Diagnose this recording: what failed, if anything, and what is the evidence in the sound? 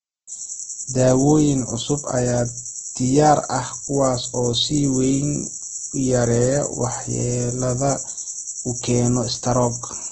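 The codec stage failed: heavy Opus compression, likely in its CELT music mode at a rate fitting about 12 kbps. Throughout the speech nothing is left above 8.5 kHz, and starved bands are refilled with folded or noise content, so everything sounds grainy and rough.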